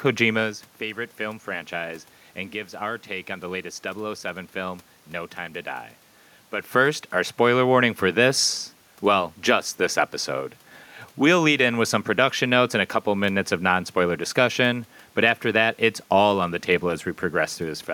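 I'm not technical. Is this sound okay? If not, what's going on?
Yes, it's fine: the background noise is just the room itself, and the changes in loudness near the start and again around six and a half seconds are only the talker shifting closer to or farther from the microphone.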